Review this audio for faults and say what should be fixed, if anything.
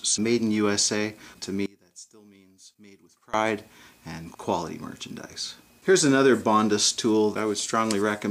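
One channel inverted is the likely cause from 1.66 to 3.34 s. With one side's polarity flipped, whatever the two channels share cancels when summed to mono, so the sound drops by about 24 dB and only a faint residue of their difference remains. Check polarity at every stage of the stereo chain and confirm mono compatibility before delivery.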